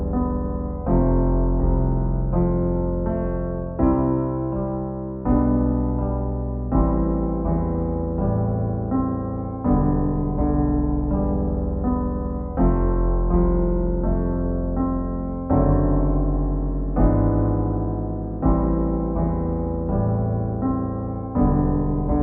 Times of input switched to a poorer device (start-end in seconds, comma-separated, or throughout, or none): none